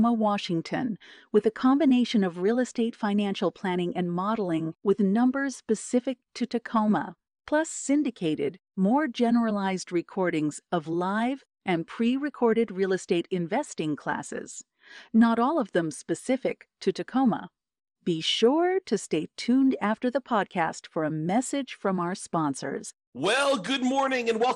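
Speech, and the whole thing has that dull, gurgly, granular edge of MP2 compression. The top end keeps flickering in and out as upper sub-bands drop away, and what's left is coarsely quantised, likely from a starved encode around 80 kbps.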